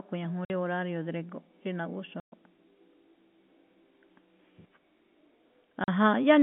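At 0.45 s the speech drops out for 50 ms, again at 2.2 s for 120 ms, and at 5.84 s for 40 ms. These are packet loss filled with silence: the receiver had nothing to play for those stretches and inserted zeros. Each gap is a whole multiple of 10 ms, which fits 10 ms packets, and the narrowband G.711 telephone signal cuts abruptly in and out at each edge.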